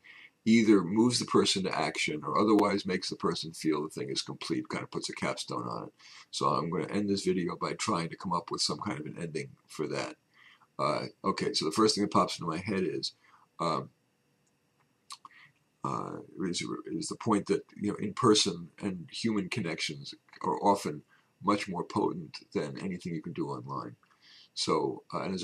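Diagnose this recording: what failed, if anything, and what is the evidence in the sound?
The driver or buffer stage failed: fresh audio did not reach the output in time, so the device replayed its last buffer instead, a repeated buffer fault. At 2.59 s one slice of about 5.8 ms, which fits a 256-sample buffer, plays two extra times back to back, each joined with a hard edge. With segments this short, the repeats fuse into a brief click or buzz rather than an audible stutter, and essentially nothing of the sound is lost.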